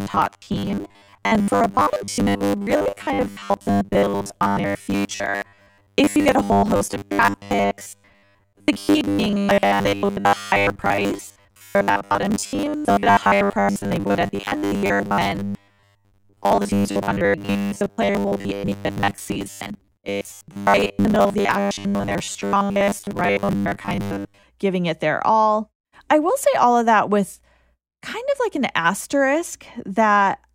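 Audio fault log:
0.01–24.44 s, robotic sound from repeated short buffers: rigid metallic buzz at 100 Hz, ending before "giving it their all"; likely from starved audio, about 70% filled by repeating 10 ms slices.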